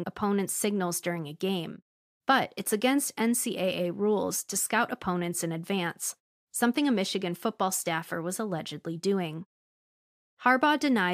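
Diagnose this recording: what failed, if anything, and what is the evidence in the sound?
Nothing stood out on listening to this speech recording, so there is no failure to point to at any stage.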